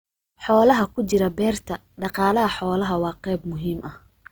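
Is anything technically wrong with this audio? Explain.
Yes. Throughout the speech there is plainly audible Opus compression damage, likely from its CELT mode at a low rate around 24 kbps. Starved bands keep their energy but are filled with folded or noise content, so the sound turns rough and grainy. On a spectrogram the band still reaches about 20.2 kHz with few holes, but harmonics look smeared and speckled.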